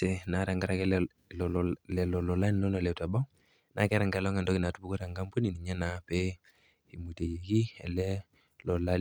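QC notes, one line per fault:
No fault found.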